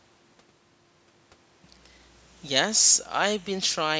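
Nothing in this speech goes wrong technically; it just carries the usual character of call microphone processing, with the lowest bass trimmed away and nothing above 8 kHz.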